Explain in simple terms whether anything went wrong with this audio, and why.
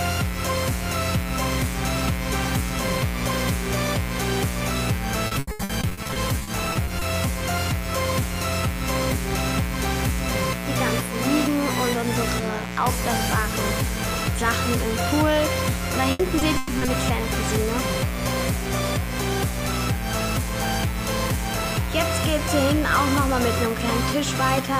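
A steady, raspy buzz runs under the whole recording. This is mains buzz: electrical interference from the 60 Hz power supply leaked into the audio.

From 5.27 to 7.03 s, and again from 16.11 to 16.89 s, the sound turns choppy and robotic. This is repeated packet loss: pieces went missing in transmission, some up to 120 ms long, and were patched over.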